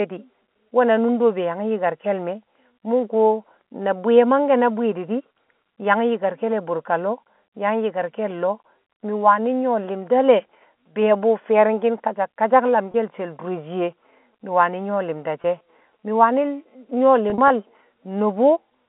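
Packet loss with pitch repetition hits at 12.92–12.94 s, after "fi̱ye̱ri̱ng ki̱n kasak kasak", and 15.42–15.44 s, before "she̱ mi̱". Each 20 ms gap, which fits one lost packet, gets filled by a looped pitch period, giving a brief buzzy hold. At 17.3–17.5 s, 80 ms of losses scattered over 200 ms, the longest run 40 ms, cause a patch of brief buzzy holds.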